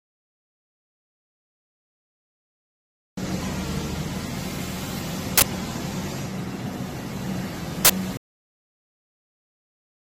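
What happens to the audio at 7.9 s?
Right around there, from 7.85 to 7.90 s, you get an uninitialised buffer: a sudden, loud burst of harsh digital noise lasting about 46 ms. What's happening is that a block got sent to the output before any audio was written into it, so whatever junk was sitting in that memory played out as samples. The length fits a 2048-sample buffer.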